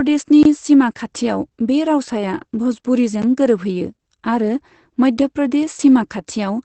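Opus voice compression runs throughout. Nothing sits above 8.5 kHz. Coarse SILK coding, which fits about 12 kbps, leaves the speech muffled, hoarse and slightly robotic.

A block of digital silence cuts in from 0.43 to 0.45 s. The output buffer likely went unfilled, which fits a 1024-sample block. Hard edges bound a 23 ms hole. A shorter gap at 3.22 s, about 12 ms, sounds like a tick.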